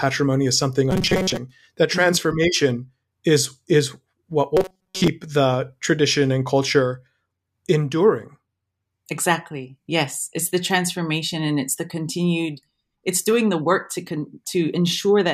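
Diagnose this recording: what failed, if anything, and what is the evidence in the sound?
A rigid 188 Hz buzz appears in the speech at 0.91–1.38 s and 4.57–5.09 s. This is robotic sound from repeated short buffers, likely a starved buffer looping 5.3 ms chunks.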